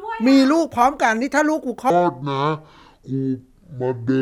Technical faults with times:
1.90-4.21 section at the wrong speed

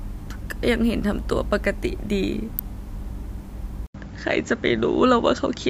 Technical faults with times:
2.59 electrical switching spike
3.86-5.70 input switched to a poorer device

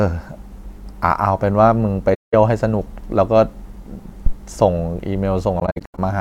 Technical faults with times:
2.14-2.34 AAC frame loss with muting
4.26-4.34 phantom power thump
5.59-5.99 AAC frame loss with muting

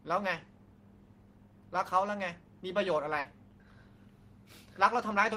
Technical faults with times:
3.19-3.28 burst of packet loss

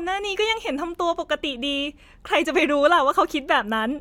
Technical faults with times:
none

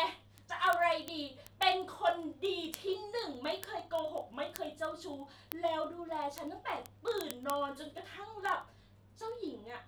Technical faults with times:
0.12-9.86 word clock ticks

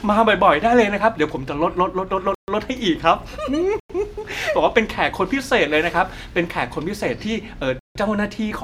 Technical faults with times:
2.35-2.48 block of digital silence
3.80-3.89 block of digital silence
7.79-7.95 block of digital silence

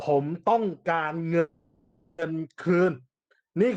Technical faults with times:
1.39-2.20 call audio freeze

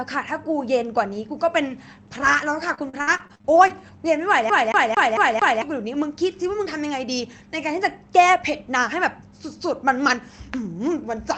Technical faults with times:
2.15-3.89 repeated packet loss (robotic sound)
4.50-5.62 CD stuck on one turn

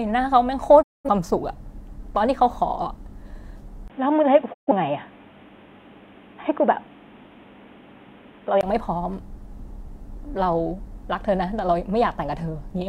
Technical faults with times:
0.81-1.09 digital broadcast dropout
3.88-8.63 input switched to a poorer device
4.52-4.72 digital broadcast dropout

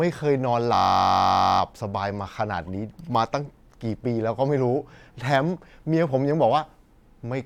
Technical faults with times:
0.75-1.60 system hang loop

